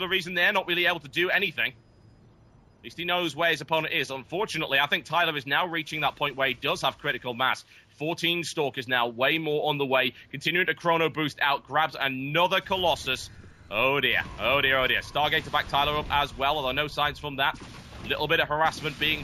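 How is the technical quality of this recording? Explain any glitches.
The recording carries one fault that runs through the whole clip. It does not come and go.

Imaging from linear upsampling is present from start to end. The sound points to audio raised from 16 kHz to 44.1 kHz by straight-line interpolation between samples, which filters poorly. The top of the original band is dulled, and a mirrored copy sits between 8 kHz and 16 kHz, around 30 dB below the signal, giving a metallic shimmer on high-frequency content. Unlike aliasing, this copy lies above the original band's edge.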